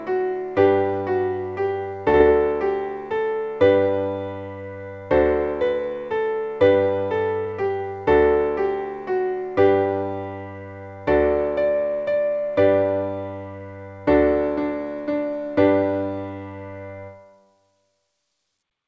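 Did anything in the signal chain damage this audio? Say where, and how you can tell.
Yes, and it happened on the network side, at the jitter buffer. Around 2.10 to 2.16 s there's a short stall from a late packet. The sound gets held for about 41 ms, with a slight buzz or dip where it should have moved on, and then it picks up right where it left off. Nothing is actually lost. The buffer ran dry, the receiver stretched the last bit of audio to cover the gap, and playback now sits about 41 ms later than before.

Right after that, from 2.18 to 2.22 s, there's a short concealed packet loss. This time 20 ms of audio never made it to the decoder. The receiver papered over the hole by extending the previous sound and then crossfading back into the real signal, so you hear a brief smear or wobble instead of a clean gap. That 20 ms of content is genuinely gone. All of this rides on a G.722 call path at 64 kbps, which is why there's nothing above 8 kHz.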